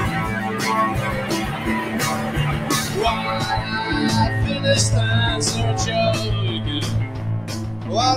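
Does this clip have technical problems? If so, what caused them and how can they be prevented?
Yes. There's a noise suppressor applied to music or sounds the whole way through. It treats sustained parts as noise, so the level pumps by around 10 dB as attacks pass and tails sink. Switch speech-oriented suppression off for non-speech material.

There's also sound cut by the noise suppressor from 7.07 to 7.9 s, dipping by up to about 5 dB over most of that stretch as the sound gets mistaken for noise. Bypassing the suppressor, or setting it much gentler, prevents this.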